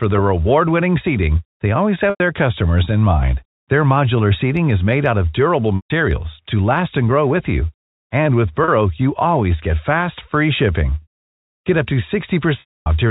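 Packet loss with pitch repetition breaks the speech five times: at 2.1 s, between "seating they always" and "customers in mind", about 100 ms lost; at 5.76 s, 140 ms; at 8.64 s, just before "you always get fast", 40 ms; at 11.02 s, right after "get fast free shipping", 140 ms; and at 12.6 s, 260 ms. The receiver fills each hole by looping the last pitch cycle and fading it out, which likely reflects 20 ms packets. The 40 ms and 100 ms gaps sound like a brief buzzy hold. The 260 ms gap decays into silence before the speech cross-fades back in. On a spectrogram each gap shows as frozen, evenly spaced harmonic stripes that dim toward the right. On the waveform it appears as identical repeating cycles with a shrinking envelope. All of this sits within the G.711 telephone band, whose content stops at 4 kHz.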